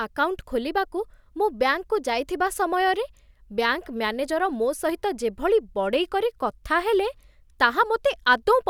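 Speech recording with no audible technical faults.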